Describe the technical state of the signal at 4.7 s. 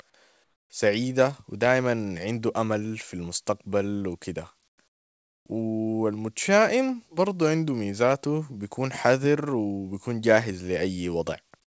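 Between 4.68 and 4.78 s the sender has likely stopped transmitting during a pause, so the receiver fills those 100 ms with comfort noise in place of the background: a flat, featureless hiss about 17 dB quieter than the room tone it replaces.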